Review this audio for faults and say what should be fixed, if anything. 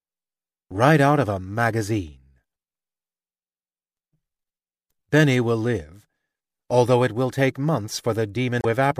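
At 8.58–8.65 s, right after "it will take months", damaged data in a compressed stream makes the decoder lose sync and resync, giving a brief glitch, unlike a clean dropout's plain silence. Verify stream integrity with checksums before decoding.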